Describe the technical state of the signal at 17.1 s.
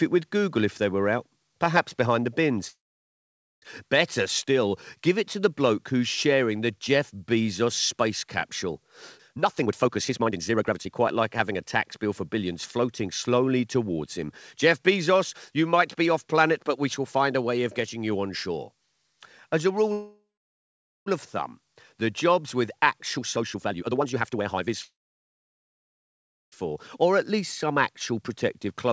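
At 17.1 s the speech is intact, with no dropout, glitch or distortion, only the steady band limit of the call path, which leaves nothing above about 8 kHz and fits a G.722 wideband codec.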